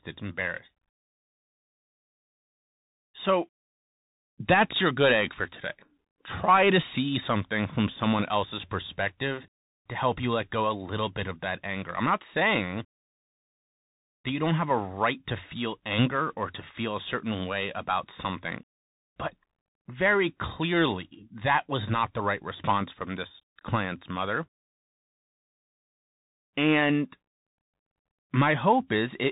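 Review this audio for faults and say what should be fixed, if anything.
Bluetooth CVSD headset codec damage runs through the whole speech clip. Nothing passes above about 3.8 kHz, so a spectrogram shows a flat ceiling there with empty space above. CVSD sends one bit per sample saying up or down, with an adapting step size, consistent with a 64 kbps link. Loud high sounds outrun the step and distort, s sounds turn scratchy, and a granular hiss lies under the speech, visible as a grainy floor under the waveform. Prevent it by recording through a wideband headset profile or a wired microphone.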